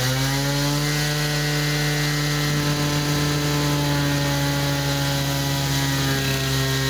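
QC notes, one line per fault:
No fault found. Nothing in this recording of everyday sound needs a QC entry.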